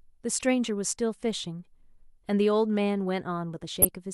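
Speech with two instances of corrupt frame decoding, from 0.33 to 0.43 s and from 3.82 to 3.87 s. Damaged compressed frames were decoded anyway, so misread gains and codes put energy at wrong frequencies, producing squeaky, noisy blips. The first fault is fairly quiet and spans what sounds like a handful of frames. The second is loud and briefer, likely a couple of frames. Unlike a dropout or concealment, these bursts add misplaced energy rather than only leaving a gap. Unlike a single-sample click, they last about the length of the damaged frames.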